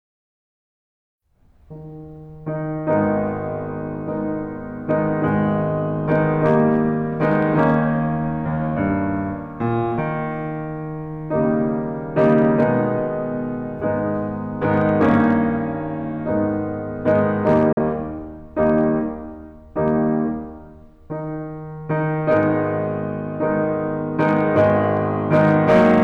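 Hard clipping runs through the whole music clip. Peaks hit the converter's limit, overdriven by about 6 dB, and are cut flat, adding crackle on loud moments.

At 17.73 s, a digital broadcast dropout mutes the sound until 17.78 s. A quick 3 ms fade leads into silence, which fits one lost 43 ms frame.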